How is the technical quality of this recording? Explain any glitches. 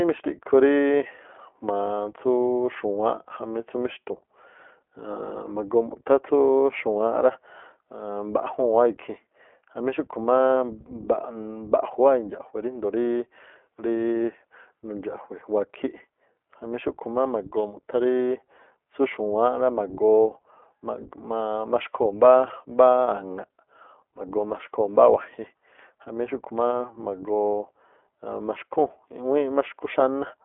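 The recording is technically weak: the speech has been squeezed through a narrowband voice codec for its whole length, and a feedback squeal breaks in partway through.

The iLBC codec artefacts run throughout. Each short frame of the speech is coded on its own, with no help from the previous one, and the result fits iLBC's 15.2 kbps mode with 20 ms frames. Only a telephone-style band of roughly 300 Hz to 3.4 kHz survives, with nothing above 3.7 kHz. The speech is plainly damaged: clear enough, but muffled, rough and faintly synthetic.

A loudspeaker feedback squeal runs from 16.64 s to 18.23 s. A microphone was picking up the loudspeaker it was feeding, and at around 3.9 kHz the loop's gain went above one. That single tone then built on itself over about a second, until it sat a few decibels louder than the speech, before it stopped at 18.23 s. It is heard as a thin, piercing whistle rising over the speech.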